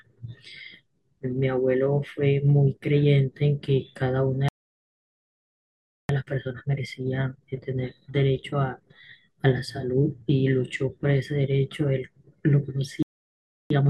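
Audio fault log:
4.49–6.09 s and 13.03–13.70 s: playback stall. The speech cuts out mid-flow for about 1.6 s, then about 0.68 s, likely because the player ran out of buffered data or its thread was blocked. The waveform drops to a flat line and the spectrogram shows a blank vertical gap.
6.09–9.09 s and 13.70–13.90 s: time-compressed catch-up. After each stall the speech is hurried, at 1.15 times speed and then 1.25 times, at unchanged pitch, because small pieces are cut out and cross-faded. This gives slightly compressed spectrogram detail.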